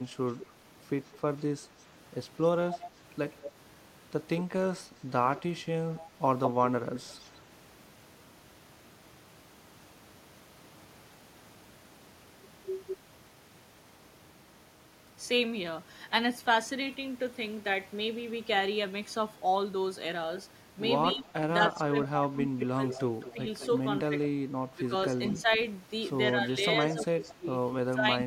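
From 0.0 to 4.44 s a delayed copy of the speech trails it by about 200 ms, some 10 dB down. It returns from 5.38 to 7.4 s at roughly equal level. This is an echo leak, likely loudspeaker sound that the far end's echo canceller failed to remove. On a spectrogram each burst of harmonics repeats as a ghost shifted about 0.2 s to the right. Weaker, shorter echoes follow at 21.1 s, 22.89 to 23.66 s, 25.3 s and 27.02 to 27.34 s, with the delay creeping up to 217 ms.

From 21.15 to 28.18 s there is speech suppressed in double talk. With both sides active, the canceller likely mistook the talker for echo and turned the speech down. Stretches totalling about two seconds dip by as much as roughly 25 dB, showing as abrupt notches in the waveform envelope and faded upper bands on the spectrogram.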